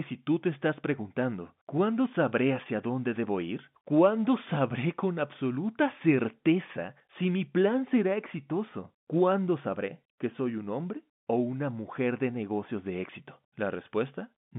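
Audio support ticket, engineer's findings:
De-emphasis applied wrongly, 7.47 to 12.92 s. Treble-cut stage engaged on audio with no pre-emphasis, or run twice. Smooth downward tilt, about 14 dB down at 10 kHz relative to 1 kHz. Speech goes dull, muffled, consonants softened. G.711 mu-law line audible as normal narrowband, roughly 150 Hz to 3.6 kHz.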